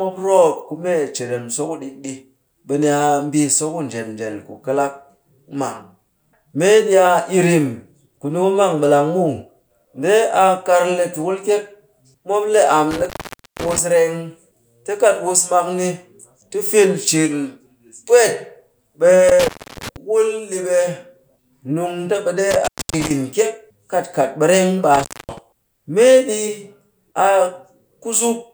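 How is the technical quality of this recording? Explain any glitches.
The speech is broken up four times by an intermittent contact fault. A loose cable or plug briefly opens the signal path, so the sound drops out with crackle at each edge.

The dropouts come at 12.91–13.79 s, just after "le am", with the line open for about 0.5 s; at 19.29–19.96 s, just before "wul ɗi ɓe", open about 0.3 s; at 22.51–23.11 s, open about 0.26 s; and at 24.94–25.38 s, just after "kat ɓereng ɓe", open about 0.25 s. On a waveform each one looks like a near-flat gap bracketed by sharp spikes. On a spectrogram the edges show as bright vertical broadband streaks, with only a faint hiss floor between them.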